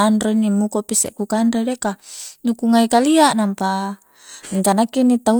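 No technical faults are audible anywhere in this recording.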